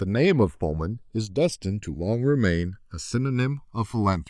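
Channels drifting apart, throughout the speech: the two channels appear to come from devices running on separate clocks that disagree by something like 300 parts per million, so the offset between them creeps steadily and reaches about a millisecond by the end. When the channels are heard together or summed to mono, that sliding delay moves a set of comb-filter notches gradually across the spectrum, giving the voice a slow, swirling flanging quality.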